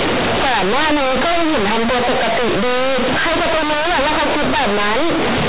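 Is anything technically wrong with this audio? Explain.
Yes, there's one clear problem, and it runs through the whole clip: companded audio read as linear. The speech was stored as G.711 A-law, which is itself a normal telephone format, but the bytes are being played back as plain linear 8-bit samples without expanding them first. Because A-law bytes represent sign and logarithmic magnitude, every sign flip throws the output across roughly half its range, so soft passages come out as large as loud ones and the waveform gets badly mangled. You hear it as harsh, very loud, buzzy distortion, with heavy noise filling the pauses.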